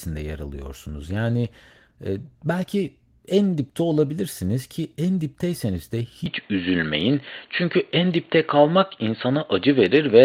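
A call bitrate drop runs from 1.04 to 5.05 s, ending just before "dipteyseniz de". The encoder's budget fell from 32 to 17 kbps and stayed at its lowest for 2.2 s, so the speech is coded more coarsely and sounds rougher and watery until it recovers.

From 6.26 s to the end, the input was likely switched to a poorer device. With no gap, the speech turns duller: nothing above 4.4 kHz gets through, the level shifts by around 5 dB, and a faint new background noise appears roughly 40 dB below the speech.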